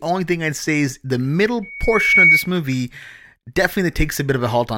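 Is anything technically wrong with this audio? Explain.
Yes. Right after "I'd say is the", from 1.62 to 2.50 s, there's loudspeaker feedback squeal: a 2.2 kHz tone where the mic-to-speaker loop runs away, swelling over about half a second to roughly 10 dB above the speech.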